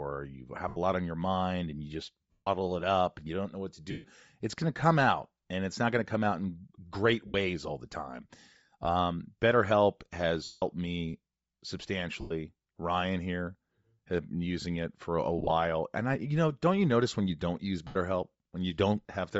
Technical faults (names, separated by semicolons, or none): Bluetooth LC3 compression; lost LE Audio frames